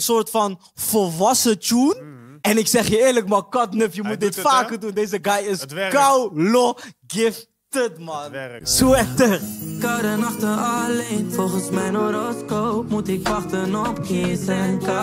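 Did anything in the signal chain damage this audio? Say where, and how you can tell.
Yes. From about 11.9 s to the end at 15.0 s the sound turns dull and muffled, with highs down about 10 dB at 10 kHz against 1 kHz. That's de-emphasis applied wrongly at playback: a treble-cut filter hit audio that never had pre-emphasis boosting it, or the cut was applied twice.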